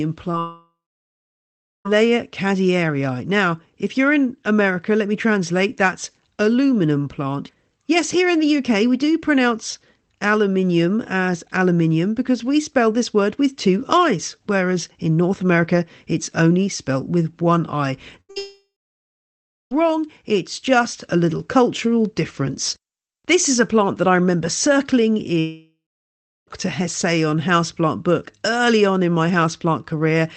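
A speech clip carried over an Opus call path, audibly band-limited to about 8 kHz, which fits a stream near 20 kbps. A short concealed packet loss at 0.31 to 0.35 s removes about 20 ms. The decoder extends the preceding sound and blends back, leaving a brief smear just before the first gap. Two bursts of packet loss follow at 18.21 to 18.31 s (80 ms missing) and 18.31 to 18.38 s (60 ms). Each time the receiver sustains the last sound as a fading buzz or hiss before moving on. There are three long gaps, at 0.39 to 1.87 s, 18.38 to 19.73 s and 25.39 to 26.49 s. Each starts with a decaying synthetic tail and then goes silent for about 1.1 s, 1.0 s and 0.7 s respectively, and the audio resumes with the span missing. This is likely a long network dropout.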